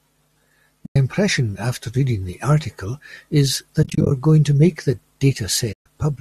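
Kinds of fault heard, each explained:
AAC frame loss with muting: at 0.86, 3.83 to 4.11 and 5.73 s, zeroed frames fade the sound into soft holes, the middle one broken into short scattered gaps.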